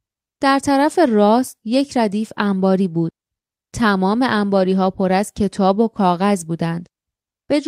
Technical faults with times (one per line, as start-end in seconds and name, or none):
none